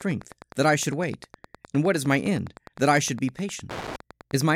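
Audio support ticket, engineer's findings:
Wi-Fi interference, steady ticking about ten times a second under the speech, whole clip. Every 102.4 ms, so that's the access point beacon. Radio sitting too close to the audio circuit, which is rectifying the RF. Ticks sit well below the speech.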